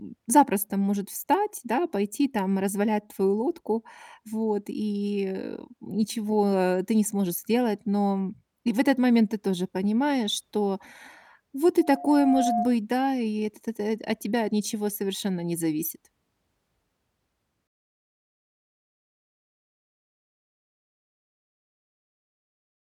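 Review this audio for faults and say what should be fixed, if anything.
There's a loudspeaker feedback squeal from 11.79 to 12.79 s: a single 709 Hz tone swells over a bit under a second until it's roughly as loud as the speech, then cuts off. That's the mic hearing the PA it feeds, with the loop gain at 709 Hz going over one so the tone keeps building on itself. Next time, pull back the gain or notch 709 Hz, and keep the mic out of the speaker's throw.

From 17.67 s to the end, the speech turns grainy, with a rough, signal-following grit around 50 dB down that's most obvious on the quieter bits and tails. That's likely low bit depth without dither: the audio was rounded to something like 9 bits, so the rounding error tracks the waveform instead of sitting as a smooth hiss. To avoid it, keep the full bit depth through the chain and add dither whenever you do have to reduce it.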